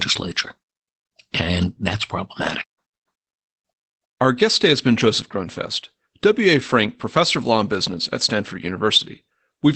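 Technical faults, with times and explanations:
Throughout, Opus voice compression: a low-bitrate SILK wideband coding, consistent with roughly 12 kbps, has cut everything above 8.6 kHz and quantised the excitation coarsely, so the speech sounds muffled, hoarse and faintly robotic, with plainly audible codec damage.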